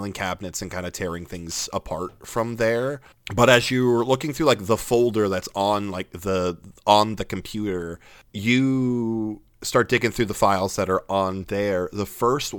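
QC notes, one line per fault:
1.00 to 6.05 s, crude rate conversion: Just after "cabinets and kind of", the speech picks up a gritty, inharmonic fizz that lasts until "the on the computer". The rate was changed from 48 kHz to 44.1 kHz by simply dropping samples, with no filtering. The dropped samples fall in a repeating pattern set by the two rates. That creates shifted, inharmonic copies of the speech, about 25 dB below it. The fizz tracks louder and brighter syllables.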